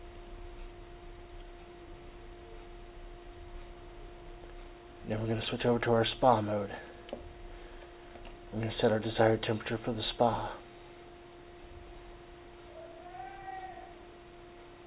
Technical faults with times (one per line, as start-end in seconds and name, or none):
none